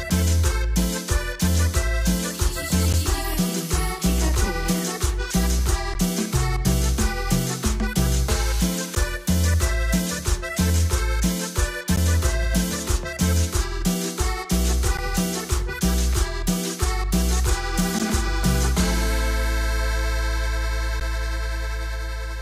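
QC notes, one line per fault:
2.93, 5.94, 8.95, 11.96, 14.97, 17.99 and 21.00 s: gap between chunks. The sound cuts out for 12 ms at each point, then resumes. The holes repeat every 3 s, one at each chunk join. Silence was inserted rather than audio dropped, so each hole has hard edges.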